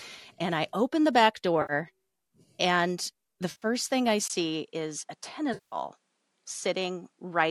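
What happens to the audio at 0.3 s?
Nothing goes wrong at 0.3 s: the speech there is intact, carrying only the light, even coloration of what is likely low-delay AAC compression at a rate that fits about 64 kbps.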